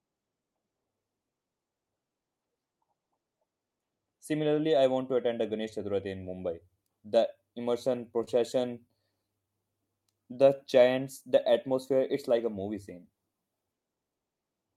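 At 8.24 to 8.29 s there is a short stall from a late packet. The jitter buffer ran dry, so the receiver held the last sound for about 29 ms until the packet arrived, then resumed without losing anything. It sounds like a briefly frozen, faintly buzzy syllable. On a spectrogram the harmonics run flat and unchanging for that stretch. The waveform shows a repeating cycle instead of evolving shapes.

Between 8.87 and 9.47 s come scattered short gaps. Roughly four packets arrived late or went missing, each patched by extending the preceding sound, with the longest around 10 ms. Together these cover only about 7% of the span. The ear catches small ticks and hiccups. A spectrogram shows thin vertical seams or smeared slivers.

From 9.99 to 11.54 s, just before "it's like a movie", a jitter buffer slow-down stretches the audio. The receiver repeated pitch periods to rebuild its reserve, adding 89 ms and running at about 95% speed while the pitch stays the same. 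Syllables drag slightly. On a spectrogram, formants and harmonic tracks look horizontally elongated.

At 13.59 to 14.20 s, right after "like a movie scene", a jitter buffer speed-up trims roughly 70 ms by cutting out short pitch-period chunks. Delivery runs at about 111% speed with unchanged pitch and sounds rushed. Spectrogram features appear compressed in time. Throughout, the Opus call path's band limit is visible as a ceiling near 12 kHz.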